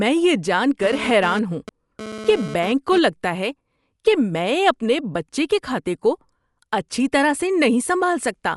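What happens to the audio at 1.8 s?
At 1.8 s the sound is in the middle of a GSM phone buzz that runs from 0.83 s to 2.98 s, starting just after "میں یہ جان". A nearby 2G handset transmitting in bursts about 217 times a second has its radio pulses rectified by the audio circuitry, giving a hard, raspy buzz roughly 12 dB below the signal. Because the phone is transferring data, it comes and goes. A spectrogram shows a comb of harmonics spaced at 217 Hz, and the waveform shows a regular pulse train.

The audio also carries Dolby Digital compression. It sounds dull, and tones are edged with rough, fluttering noise. This is likely from AC-3 coding at a low bitrate, which fits around 64 kbps. The encoder narrows the band and leaves many frequency lines without mantissa bits, and the decoder fills them with dither noise. On a spectrogram, everything above 11.4 kHz is empty, and there is speckled, noisy texture where detail was dropped.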